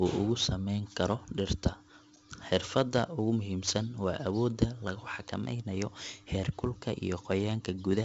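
A speech clip with heavy 4-bit ADPCM compression throughout. A gritty hiss rides on every loud syllable and rises and falls with the level. Sharp onsets distort where the step size lags. Nothing is heard above 7.7 kHz, which fits a 64 kbps stream.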